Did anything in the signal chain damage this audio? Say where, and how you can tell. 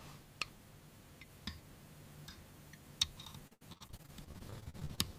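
Yes. The network path repeatedly dropped or delayed packets from 3.47 to 4.99 s, producing repeated packet loss (robotic sound). The receiver patched each hole by stretching the last good sound forward, but the next gap arrived almost at once. About twenty short dropouts, the longest 78 ms, leave roughly a third of that stretch concealed. The audio turns choppy, with brief pieces missing between the repeated fragments.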